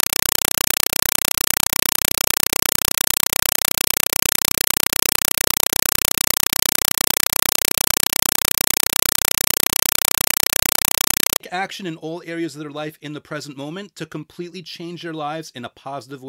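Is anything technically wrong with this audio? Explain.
Yes. From 0 to 11.4 s, before "action in all areas", a compressed stream played as audio: undecoded AC-3 data arrives as 4 ms noise bursts 31.25 times a second, giving loud chattering static instead of speech.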